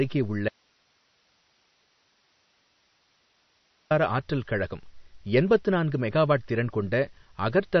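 From the start and throughout, the speech carries MP3 compression damage that is plainly audible. Nothing reaches above 6.1 kHz, so a spectrogram shows a flat ceiling there, with sparse, flickering patches below it where weak frequency lines drop in and out frame by frame. The result is a watery, swirly texture with smeared consonant attacks and metallic edges on s sounds, which fits a low bitrate of about 32 kbps and most likely comes from a heavily starved encoder.

At 0.49 s the speech cuts off abruptly into an audio dropout to a faint residue. For 3.42 s, until 3.91 s, only hiss remains, roughly 40 dB below the speech level. The speech then snaps back on "ஆற்றல் கழகம் எண்பத்து நான்கு". The waveform collapses to a thin noise band with square edges rather than a tapered fade, and the spectrogram shows faint, even noise across the gap. This pattern most likely means the signal feed was lost while the later path stayed live.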